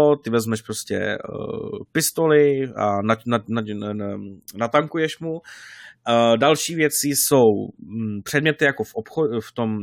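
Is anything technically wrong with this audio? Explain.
No, no technical faults here.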